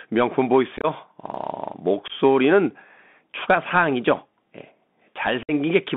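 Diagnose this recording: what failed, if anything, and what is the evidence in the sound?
The link runs through a Bluetooth CVSD headset codec, a codec-stage fault present for the whole recording. The speech is confined to roughly 200 Hz to 3.6 kHz, which fits a 64 kbit/s CVSD link coding one up-or-down bit per sample with an adapting step. That step can't keep pace with loud high-frequency energy, so sibilants turn scratchy and a granular hiss sits under the speech. The damage is plainly audible throughout.

Unconcealed Bluetooth headset packet loss also occurs on the radio hop between headset and phone: lost voice packets were replaced with silence or idle fill. At 0.77 to 0.86 s about 52 ms goes missing, scattered over roughly 68 ms with the longest gap near 22 ms, which sounds like a rough crackle. At 2.08 to 2.13 s about 19 ms drops out, and at 5.43 to 5.52 s about 56 ms is lost. Each hole has abrupt edges.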